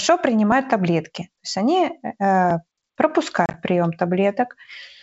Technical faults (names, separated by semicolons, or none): packet loss on an ADPCM call